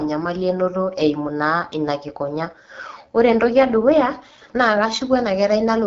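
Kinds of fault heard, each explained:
AMR wideband (HD Voice) codec: the speech has the rough, raspy edge you hear when this phone codec runs at one of its lowest rates, which fits the 8.85 kbit/s mode. It builds speech from a pulse-driven model of the vocal tract up to 6.4 kHz and pads the band above with shaped noise, so the top end is hissy rather than detailed, and there's nothing above 7.5 kHz. The damage is plainly audible throughout.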